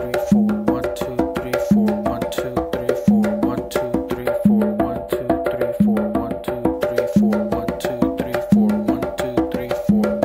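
Channel delay (comb filtering) runs from 4.21 s to 6.74 s. One channel arrives a few samples late, well under a tenth of a millisecond, and when the two are summed to mono the shared content cancels at evenly spaced frequencies. With so short an offset, the first notch falls high, around 7 kHz, so the sound loses air and sparkle and takes on a dull, slightly phasey edge until the channels realign.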